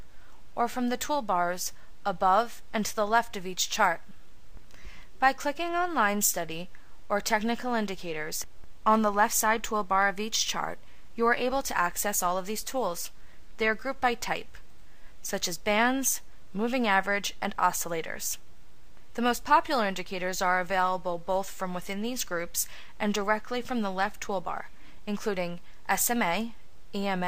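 Nothing here sounds wrong on the technical side, so there's no fault to point to anywhere in this audio.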